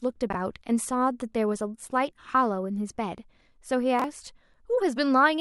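Chunks out of order occur at 0.30 to 0.35 s and again at 3.99 to 4.04 s in this speech. Each time, a chunk of about 23 ms plays one chunk late. Nothing is lost, but the swapped order leaves three hard joins, heard as a brief jumbled stutter.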